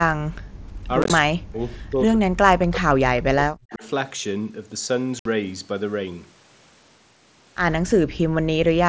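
Background gated by the echo canceller, 0.16 to 0.87 s: while the far end's audio played through the loudspeaker, the canceller clamped the microphone path, pulling the room sound down by about 37 dB for roughly 0.7 s. The ambience sinks to near silence and then swells back once the canceller releases. The same gating returns at 8.29 to 8.46 s, a shorter dip of about 36 dB lasting roughly 0.15 s.

Unconcealed Bluetooth headset packet loss, 1.02 to 1.10 s: audio packets between headset and phone went missing, and nothing was patched into the gaps. About 52.5 ms is lost, scattered over 75 ms with no single hole longer than 15 ms, which points to several short packets failing in scattered runs. The speech sounds briefly chopped and crackly, with hard-edged gaps. A second burst at 5.19 to 5.26 s removes about 60 ms.

Speech suppressed in double talk, 1.22 to 1.61 s and 1.79 to 3.83 s: the local speech dips by around 40 dB, affecting roughly 0.4 s and then about 1.5 s. 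The likely cause is both sides talking at once, so the echo canceller could not tell the talker from loudspeaker echo and attenuated everything. The speech itself, carried over the mSBC link, stays limited to 8 kHz.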